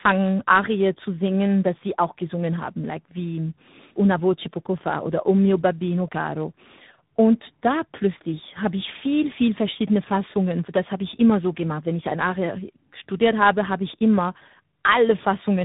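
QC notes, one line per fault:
Throughout: tandem speech coding. The speech has the roughness and warble of two speech codecs in a row. It points to a low-rate mobile codec in the AMR-NB 7.95 kbit/s class, passed through G.711 mu-law and then recoded by G.726 at 32 kbit/s. Each stage quantises the previous stage's already degraded output, so the errors compound. Nothing is present above 3.8 kHz, which gives the muffled, narrowband character.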